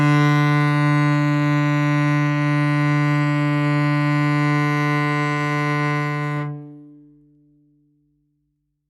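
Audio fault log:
No faults can be heard in this music. Where the level rises or falls, it moves gradually, as a fader would.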